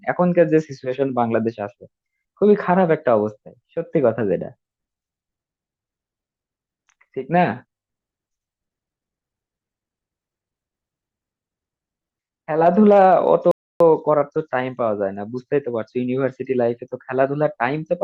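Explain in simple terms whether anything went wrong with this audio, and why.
At 13.51 seconds the speech stops dead and stays silent until 13.80, a rebuffering stall: the player ran out of downloaded audio and waited. Unlike a dropout, nothing is skipped; the speech picks up exactly where it stopped, only 0.29 seconds later.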